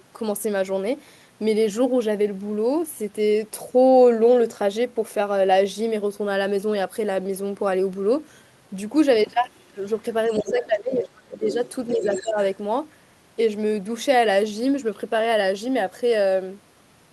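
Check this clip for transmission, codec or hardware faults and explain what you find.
Two echo-related faults appear in the middle of the clip, both tied to how the call's echo cancellation handled the far end.

Other side's voice leaking through: a second voice sits behind the speech at 9.36–9.64 s, barely audible and far below the talker. It returns more clearly, roughly 10 dB under the speech, at 10.28–10.65 s, 11.50–11.71 s and 11.88–12.48 s. The likely cause is the far end playing from a loudspeaker into the talker's microphone, with the echo canceller leaving residue behind.

Speech suppressed in double talk: from 10.29 to 11.48 s the talker's speech ducks for about a second in total, sinking by as much as roughly 25 dB. A shorter, milder dip of around 10 dB follows at 11.96–12.37 s, about 0.3 s in all. Both dips overlap the leaked far-end voice. That points to the likely cause: the echo canceller couldn't separate the two sides talking at once and attenuated everything it heard.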